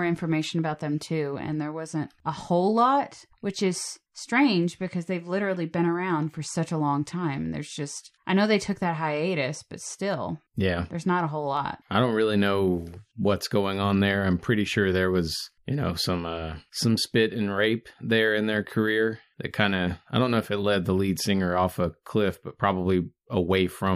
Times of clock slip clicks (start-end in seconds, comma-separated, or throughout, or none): 0.56-23.55